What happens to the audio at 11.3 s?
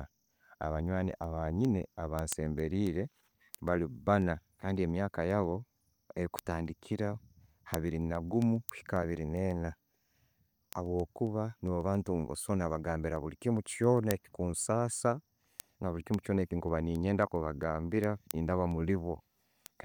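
At 11.3 s the speech carries word clock ticks, which run from 0.16 s to 19.80 s. An unlocked receiving clock, off by something like 150 ppm, slips a sample about every 0.15 s, giving sharp ticks. A spectrogram shows evenly spaced thin vertical broadband lines, and the waveform shows single-sample glitches.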